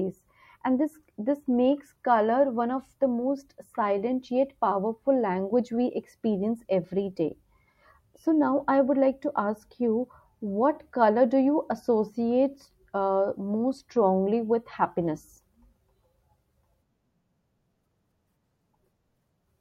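No technical faults can be heard anywhere in the speech recording; the signal stays continuous and steady throughout.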